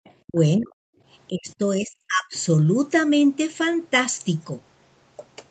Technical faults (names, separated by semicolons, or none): other side's voice leaking through; speech suppressed in double talk